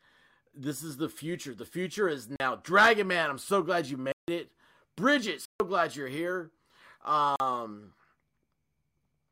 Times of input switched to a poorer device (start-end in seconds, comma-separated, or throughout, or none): none